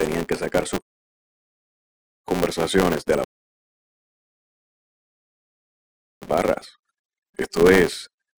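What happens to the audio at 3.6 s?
At 3.6 s you're right in the middle of a rebuffering stall. Just after "sacar sus conversaciones de", at 3.24 s, the sound drops to silence and stays there until 6.22 s. The player ran dry of downloaded audio and simply waited for more to arrive. When it resumes, it picks up exactly where it left off. Nothing gets skipped, but the pause adds about 3 s to the clip.

The clip also carries a filter restarted on every block. The filter starts each block from a blank state, so every block opens with a tiny transient. These repeat 200 times a second, which fits blocks of about 5 ms, and you hear them as a 200 Hz buzz that rises and falls with the level. At 3.6 s there's no signal for it to ride on, so the buzz disappears during the silence and comes back with the audio at 6.22 s.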